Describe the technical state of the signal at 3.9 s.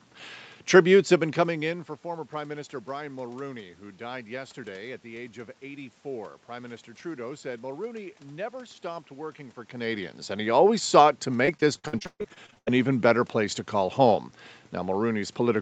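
At 3.9 s the speech is intact, with no fault in the signal at that moment.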